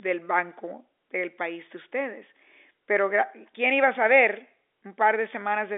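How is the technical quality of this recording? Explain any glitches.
There are no glitches in the speech, which arrives over an ordinary telephone line using G.711 A-law coding at 64 kbps, so its bandwidth is held to about 300 Hz to 3.6 kHz and any coding texture stays faint at most.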